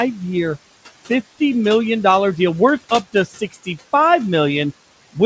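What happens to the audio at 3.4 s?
The noise suppressor misjudged part of the speech as background noise between 3.13 and 3.68 s. Its gain tracking treated the quieter speech energy in that stretch like the steady noise it was removing, so it pulled those bands down with the noise, by about 14 dB at the deepest point. This is speech cut by the noise suppressor. Roughly a third of a second in total is affected, and soft consonants and tail ends there come across swallowed and faint rather than simply quieter.

Underneath that moment, the same suppressor is producing its ongoing noise suppressor artifacts. It is lowering the room noise by about 15 dB frame by frame, with the noise floor about 17 dB below the speech. Around 3.4 s the background audibly sinks and rises with the speech. The G.722 call path limits everything to below 8 kHz.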